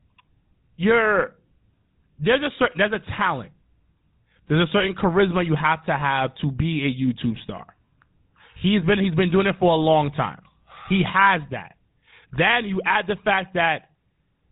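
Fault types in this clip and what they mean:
GSM full-rate codec: the old phone codec rebuilds speech from a coarse pulse-driven model, so it's plainly buzzy and gravelly, nothing above 3.9 kHz, fitting 13 kbps.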